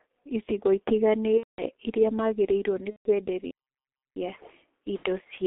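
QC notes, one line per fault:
throughout: G.723.1 codec. The speech sounds muffled and hoarse, with smeared consonants and nothing above about 3.6 kHz. This points to a low-rate telephony codec running near 6.3 kbit/s, coding 30 ms frames and updating its voice model too slowly to follow fast articulation.
1.38–1.66 s, 2.90–3.08 s, 4.97–5.04 s: VoIP packet loss concealed by the speech codec. Each gap turns into a buzzy tone or coloured noise that fades, and the two longer gaps go silent from the third lost frame, then the speech is weak for a moment after it returns. The decoder is guessing from its last pitch and filter across 210, 150 and 60 ms of missing audio, which fits about seven, five and two lost 30 ms frames.
3.51–4.16 s: playback stall. Just after "iria magĩrĩirwo nĩ" the sound cuts off cleanly and stays silent for about 0.65 s before carrying on. The likely cause is a player that ran out of buffered data or had its output thread blocked until it caught up.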